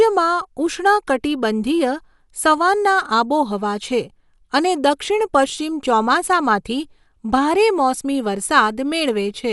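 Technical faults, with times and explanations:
Throughout, Dolby Digital compression: the speech sounds dull, with nothing above 11.4 kHz and rough, fluttering noise around tones. The likely cause is an AC-3 encoder short of bits, fitting about 64 kbps, that drops the top band and leaves bare lines that the decoder fills with noise. A spectrogram shows a hard ceiling and speckled, blocky upper bands.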